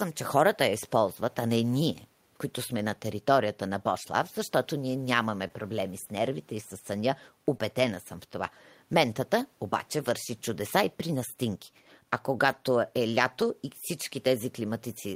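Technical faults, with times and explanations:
5.47–5.51 s, short concealed packet loss: about 20 ms of audio never reached the decoder in time, so the receiver extended the preceding sound for 20 ms and then blended back into the real signal. This is heard as a brief smear or wobble. Unlike a rebuilt packet, nothing of the original reached the listener, so a short sound can simply vanish.
7.53–7.55 s, lost packet rebuilt from error correction: a 20 ms stretch was restored from a low-bitrate copy carried in the following packet, so there is no gap. The audio briefly turns rougher and noisier. That coarser but continuous texture is what separates it from concealment.
7.57–7.62 s, short concealed packet loss: right after the rebuilt frame, another 20 ms went missing and was filled by about 23 ms of extrapolated sound before the fade back.
12.46–12.52 s, lost packet rebuilt from error correction: 40 ms was reconstructed from redundant copies, which fits two lost packets. 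The rougher, noisier texture lasts twice as long as at 7.53 s, yet the sound stays continuous, with no smear or dropout.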